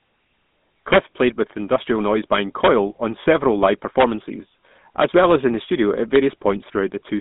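From start to finish the speech has a buzzy, gravelly roughness and a muffled top, with nothing above about 3.8 kHz. That is the GSM full-rate codec, which fits 13 kbps. It rebuilds the voice from a vocal-tract model and coarse pulse excitation, inside a 150 Hz to 3.6 kHz line band.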